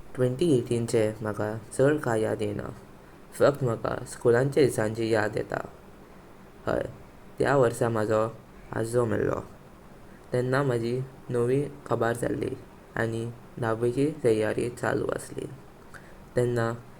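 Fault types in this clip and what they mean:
No faults can be heard anywhere in the speech.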